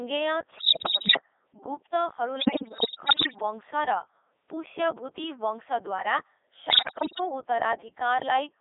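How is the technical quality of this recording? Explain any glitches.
The technical quality is poor: heavy vocoder coding throughout, plus three bursts of radio bit errors.

The whole clip passes through the Codec 2 vocoder at 3.2 kbit/s, in a band of about 300 Hz to 3.6 kHz. Only pitch, voicing, level and a spectral outline survive, and the decoder rebuilds speech from sine waves. The result is a buzzy, robotic voice, unlike the swirly, watery artefacts of a waveform codec.

Bit errors on digital voice radio strike from 0.56 to 1.21 s, 2.40 to 3.42 s and 6.70 to 7.20 s. The error rates are roughly one bit in five, one in ten, and somewhere in between. Corrupted bits redraw whole frames' pitch, level and tone, so the voice lurches into bleeps, warbles and gibberish rather than dropping out to silence as packet loss would.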